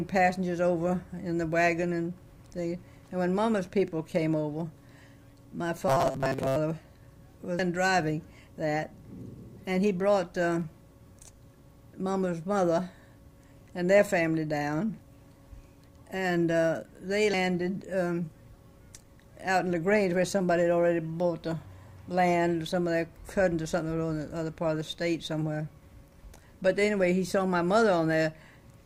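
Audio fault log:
5.88–6.56 s, robotic sound from repeated short buffers: for most of this span the sound becomes a rigid metallic buzz locked at 133 Hz while still loosely tracing the original contour. The likely cause is starved playback: one very short slice of audio, about 7.5 ms (one cycle of 133 Hz), is looped while the real material is dropped. On a spectrogram this shows as evenly spaced horizontal harmonic lines at multiples of 133 Hz. The waveform shows identical short cycles repeating.
6.39 s, 7.59 s, 17.33 s, 26.23 s, compressed frames skipped: at each point the audio jumps forward, losing roughly 300 ms, 150 ms, 100 ms and 50 ms respectively, always in whole multiples of a 24 ms frame. Undecoded frames are passed over, so the audio jumps ahead by the length of the frames left out. The spectrogram shows an abrupt change in texture. The waveform shows a sudden change in shape.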